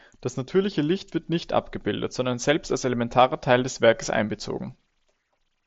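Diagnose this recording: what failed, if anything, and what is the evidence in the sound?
Nothing failed; no faults found.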